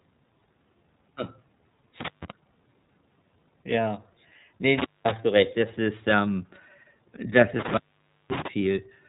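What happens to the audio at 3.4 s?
At 3.4 s, as across the whole clip, the speech is passing through the iLBC codec, coding each frame's excitation independently, which fits its 13.33 kbps, 30 ms mode. Nothing above 3.8 kHz survives, leaving the speech muffled, slightly rough and synthetic-sounding.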